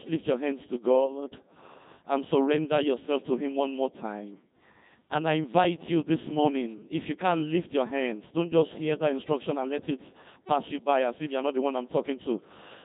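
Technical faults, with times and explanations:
Throughout, Codec 2 vocoder: the speech has that robotic, buzzy quality you get when a decoder rebuilds the voice from sine waves instead of keeping the actual waveform. Only pitch, voicing, energy and a rough spectral envelope make it through, so the natural texture is gone and the damage is heavy, which fits a 2.4 kbit/s mode. There's also nothing above 3.8 kHz, so it sounds narrow and dull on top.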